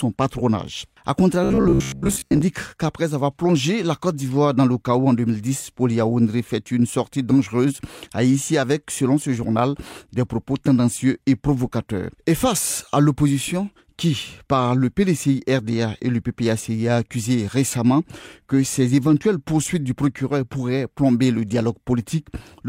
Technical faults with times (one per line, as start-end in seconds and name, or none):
1.44-2.42 robotic sound from repeated short buffers